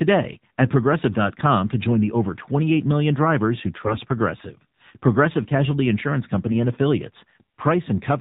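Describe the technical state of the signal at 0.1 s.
At 0.1 s the speech already carries the AMR narrowband mobile codec, and it runs the whole clip. Nothing above 4 kHz survives. A pulse-driven vocal-tract model rebuilds each 20 ms frame, giving a plainly buzzy, synthetic tone that fits a low rate near 7.4 kbps.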